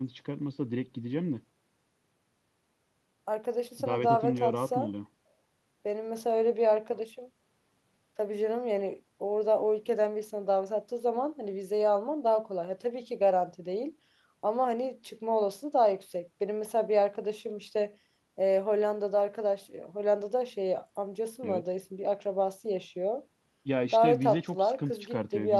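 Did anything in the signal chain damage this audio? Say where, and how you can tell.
No, nothing along the signal chain has left an audible mark on this speech recording, so there is no damaged stage to point to.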